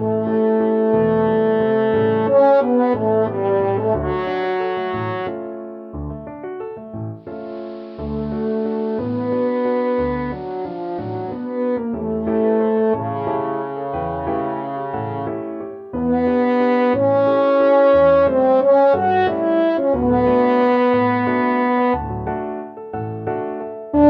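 From 7.13 s to 11.63 s the sound turns dull and boxy, and a faint hiss sits well below the programme. The level shifts by about 1 dB. This is digital radio blending to analogue: the receiver lost its digital stream and cross-faded over roughly 0.46 s to the station's AM broadcast, whose narrow bandwidth strips the treble, then faded back to digital at 11.63 s.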